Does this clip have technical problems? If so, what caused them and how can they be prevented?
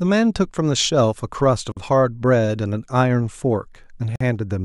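Yes: gaps at joins of encoded pieces, 47 ms gaps at 1.72–1.77 s and 48 ms at 4.16–4.21 s, from untrimmed encoder delay and padding, showing as blank vertical stripes. Trim each piece's encoder delay and padding, or encode the speech as one continuous stream.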